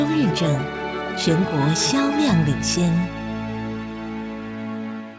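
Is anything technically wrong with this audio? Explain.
No, nothing stood out on listening; the audio comes through what sounds like a wideband call path, with nothing above 8 kHz.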